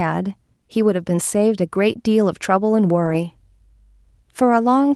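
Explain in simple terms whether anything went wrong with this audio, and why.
Around 3.05 to 3.15 s there's a lost packet rebuilt from error correction: a few call packets went missing, and a rougher backup copy filled the hole, so the speech briefly turns grainier.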